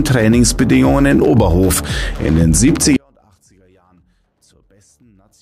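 At 2.97 s the sound cuts out abruptly and never returns. This is an audio dropout to a faint residue. The wanted signal is lost, but the path stays live. Only a faint leak remains, roughly 40 dB below normal, likely from a broken feed after the break.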